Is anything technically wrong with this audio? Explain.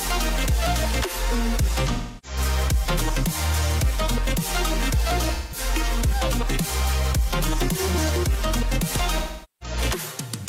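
Yes. AAC frame loss with concealment occurs at 1.93–2.38 s, 5.34–5.58 s and 9.19–9.78 s, with roughly 0.30, 0.17 and 0.43 s of audio missing. The decoder rebuilt each gap from the last good spectrum, so it sounds smeared and phasey. On a spectrogram the detail blurs into a held, fading wash, and the waveform envelope dips.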